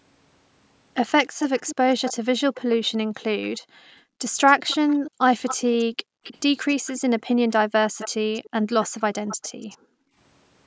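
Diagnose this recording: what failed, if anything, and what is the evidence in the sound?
Echo leak, in call processing. A copy 10–30 dB below the speech trails it by 268 ms at 1.39–2.89, 3.42–3.48, 4.46–7.01 and 7.99–9.77 s. It is likely loudspeaker pickup the far-end canceller missed.

Background gated by the echo canceller, also in call processing. Room sound drops by about 40 dB at 3.59–4.21, 6.03–6.23 and 9.49–10.16 s. The canceller clamped the microphone, then released it.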